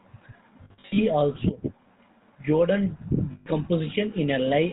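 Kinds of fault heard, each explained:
GSM full-rate codec: The whole speech clip passes through the original GSM mobile codec. It models the vocal tract and drives it with sparse, regularly spaced pulses. Nothing above 4 kHz survives. The voice sounds plainly buzzy and gravelly throughout, which fits 13 kbps full rate.
lost GSM frames: Missing frames are filled by repeating the last good frame's settings at falling level. From 0.64 to 1.00 s, short losses are scattered, the longest about 70 ms. Another gap runs from 3.32 to 3.47 s. Each sounds like a rough, metallic ring.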